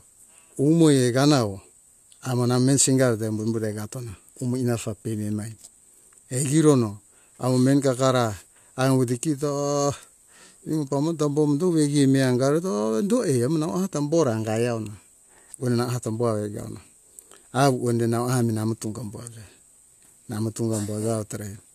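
Nothing in the recording stood out as a technical problem on listening.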